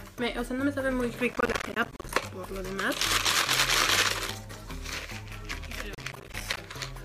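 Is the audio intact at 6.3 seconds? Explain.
No. At 6.3 seconds the sound is torn by a gritty burst of crackle running from 5.95 to 6.57 s. This is processor overload crackle: about twenty buffers of around 10 ms each missed their deadlines, each leaving a hard-edged gap of silence.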